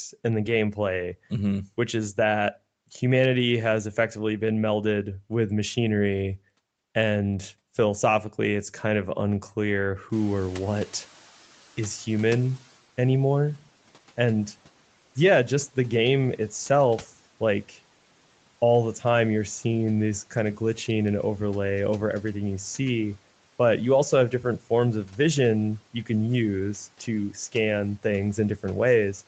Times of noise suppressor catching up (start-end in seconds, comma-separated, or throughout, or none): 10.12-12.78